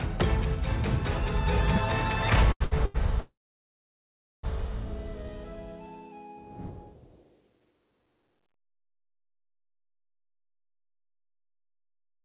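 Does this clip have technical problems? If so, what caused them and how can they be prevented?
Yes. The audio passes through a call path whose content stops at 4 kHz, which fits G.711 A-law at 64 kbps, and it carries three kinds of fault.

Short stalls from a late packet occur at 2.52 to 2.62 s, 2.64 to 2.73 s and 2.85 to 2.96 s. Each time a packet arrived after it was due, the jitter buffer ran dry and the receiver stretched the last sound for 84, 70 and 90 ms before resuming where it left off. Nothing is lost, but each sound is held too long and the playout delay grows by the same amount. Prevention: a larger or adaptive jitter-buffer target on a network path with less jitter absorbs late packets before the buffer empties.

A call audio freeze runs from 3.20 to 4.45 s. The last sound is continued and then fades, and about 1.1 s of the 1.23 s fill is silence. The audio then picks up from the point where it stopped, so a gap has been inserted and nothing is missing. 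The likely cause is packets held up in transit long enough to drain the jitter buffer completely. Prevention: fix the congestion or route change behind the hold-up, for example with QoS marking or a more stable link.

A jitter buffer speed-up covers 10.34 to 12.18 s. After the delay built up earlier, the receiver removed many short pieces of one or a few pitch periods to shrink the buffer back to its target, cutting roughly 0.3 s in total. The sound plays at 119% speed with the pitch unchanged and comes across as hurried. Prevention: keeping delay spikes small avoids this catch-up, and a gentler maximum acceleration rate makes any catch-up less noticeable.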